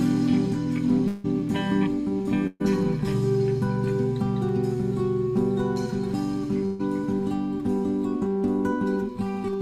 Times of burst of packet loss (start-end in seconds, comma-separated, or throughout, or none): 2.47-2.62, 6.66-6.81